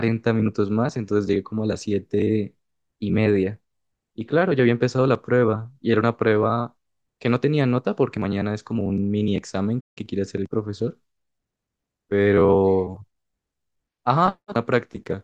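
At 9.80 s the speech just cuts out for about 160 ms, a playback stall, and picks back up at 9.98 s. That dead gap mid-flow is likely the player starving for data or its thread getting blocked briefly.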